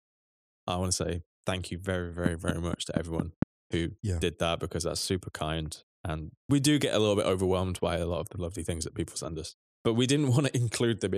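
A steady ticking cuts across the speech from 2.26 to 3.43 s: a train of clicks at about 4.3 per second, roughly seven in all, evenly spaced and peaking around 20 dB above the voice. The likely cause is interference from nearby equipment or a faulty connection or power supply.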